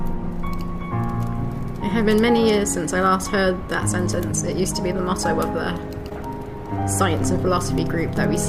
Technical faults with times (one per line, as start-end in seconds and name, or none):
6.09-6.13 short concealed packet loss